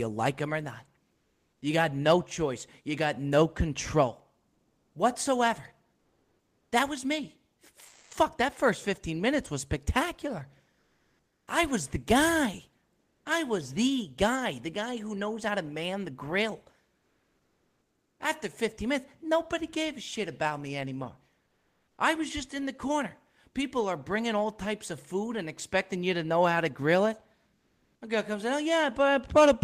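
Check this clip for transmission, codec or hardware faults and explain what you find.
Comfort noise in place of the background appears in seven speech pauses: 1.13–1.61 s; 4.53–8.11 s (about 1.4 s replaced); 10.79–11.47 s, after "minutes was spectacular" and before "I was the guy"; 12.99–13.25 s, between two "I was the guy"; 16.99–18.19 s, after "to man the grill"; 21.47–21.97 s; and 27.55–28.01 s.

This is likely Opus discontinuous transmission. The sender goes silent during pauses, and the receiver fills the gap with synthetic noise. That noise sits about 50 dB below the loud passages and within about 2 dB of the real background level. It sounds like a flat, featureless hiss. On a spectrogram it shows as a smooth, uniform band with no texture. On the waveform it shows as an even, low-level floor.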